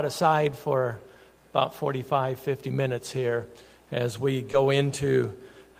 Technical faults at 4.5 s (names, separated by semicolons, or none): short concealed packet loss